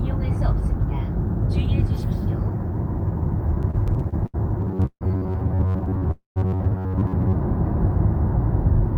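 Repeated stalls (stutter) first appear from 3.61 to 4.36 s. The jitter buffer ran dry eight times because packets arrived late or too slowly. Each time the receiver stretched the last sound to bridge the gap, adding 185 ms in total, with the longest hold at 76 ms, faded as it went. About a quarter of that span is filler, yet nothing is lost. The sound catches and drags, stammering forward.

Robotic sound from repeated short buffers runs from 4.60 to 7.36 s. For most of that stretch the audio is a rigid, metallic buzz pitched at 93.8 Hz, which fits a loop of roughly 10.7 ms. The likely cause is fresh audio arriving too seldom, so the software kept replaying that short slice and skipped real material in between. The repetition imposes a fixed pitch, while the rough outline of the original sound still comes through.

A call audio freeze sits inside that stretch at 4.86 to 5.03 s. The sound halts, carries on briefly as a decaying tail, then falls to about 60 ms of silence before resuming exactly where it stopped. 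A 149 ms gap is inserted, with nothing missing. The likely cause is packets held up in transit, emptying the jitter buffer.

Repeated stalls (stutter) return from 5.73 to 6.03 s. There are five shorter stalls, the longest 21 ms, adding 64 ms in all, which is about a fifth of that span. The hiccups are lighter but give the same stammering drag.

A second call audio freeze, longer than the first, follows at 6.11 to 6.38 s. The sound hangs, fades, and goes silent for about 130 ms, then picks up again where it left off. This inserts a 246 ms pause, with nothing missing. Here too packets were likely delayed on the network until the buffer ran out.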